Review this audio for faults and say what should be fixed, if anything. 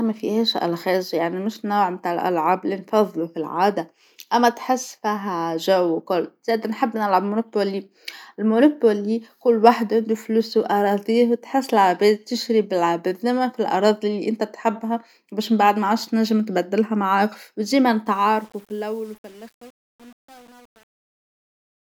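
Truncation distortion on a fade runs from 18.06 s to the end at 21.82 s, just after "تنجم تبدلها معاه وديما". The fade-out starting around 18 s was computed at too few bits, which fits an 8-bit word length, and no dither was added. From 18.21 s onward the shrinking waveform collapses into coarse square steps, so the speech turns gritty instead of tapering away. To prevent it, apply fades at 24-bit or float resolution and add dither whenever the word length is reduced.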